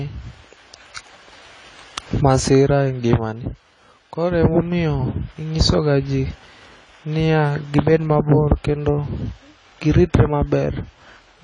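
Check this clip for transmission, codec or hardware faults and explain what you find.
One codec fault runs through the whole clip. AAC compression is the likely cause: the speech has nothing above 10 kHz and sounds dull, with a warbling, fizzy smear on sibilants, which fits AAC-LC at a low bitrate near 24 kbps. A plain low-pass filter would also dull the top end, but it would leave the remaining spectrum clean. The blurred, swirling texture here comes from coarse quantisation of each frame's frequency lines.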